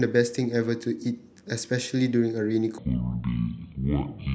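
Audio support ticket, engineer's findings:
From 2.78 s to the end at 4.35 s the speech turns deep and slow, dropping roughly ten semitones. Section at the wrong speed: playback runs at 0.549x. Likely cause is a player or edit clocking that segment wrongly.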